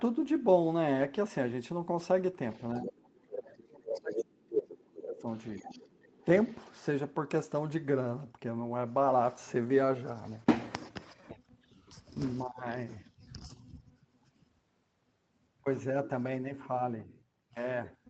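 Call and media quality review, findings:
Other side's voice leaking through at 2.51–2.91, 3.97–4.25, 4.5–4.66, 5.29–6.25 and 6.45–6.71 s. Second voice is audible under the talker, rising to roughly speech level near 4.5 s and fading to barely audible by 6.7 s. Likely loudspeaker echo left in the microphone signal by the echo canceller.

Speech suppressed in double talk, 2.8–5.24 s. Talker's level dips for about two seconds in total, with the deepest drop around 30 dB, overlapping the leaked far-end voice. Likely the echo canceller could not separate talker from echo and attenuated both.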